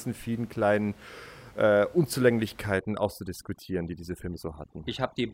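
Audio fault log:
2.75–5.34 s: overdone noise removal. From 2.75 s to the end, the background drops to near silence scattered with twinkling specks. Noise reduction set too strongly is muting individual frequency bands that sit near its noise estimate, taking the quieter parts of the speech along with the room noise that sits about 25 dB below it.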